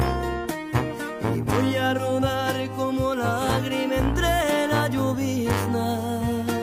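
Nothing stood out on listening to the audio.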